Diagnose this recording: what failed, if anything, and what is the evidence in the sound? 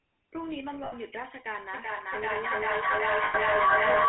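Codec stage: a GSM full-rate codec throughout gives the speech a buzzy, gravelly roughness; the spectrogram shows a band of 250 Hz to 3.4 kHz with nothing above.

Network stage: lost GSM frames at 0.84–0.93 s (80 ms) and 3.24–3.36 s (100 ms) are bridged by repeating the last good frame, heard as a metallic ring and seen as smeared spectral streaks.

Call processing and room loop: feedback echo between two devices from 1.73 s to the end sends speech around again roughly every 0.4 s, thinner each pass. The repeats peak about 12 dB above the speech and pile up, seen as regularly spaced, stacked copies in the waveform.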